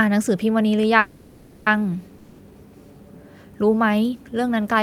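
Packets were likely held up and the jitter buffer ran dry, producing a call audio freeze in this speech from 0.99 to 1.68 s. The last sound is stretched into a fading buzz for about 670 ms, then the speech resumes where it stopped, with nothing lost but everything after it running about 670 ms late. At 2.18 to 2.40 s, a long network dropout, likely from audio not arriving at all, leaves another fading fill of about 200 ms, and when the speech returns the 200 ms that should have been heard there is gone.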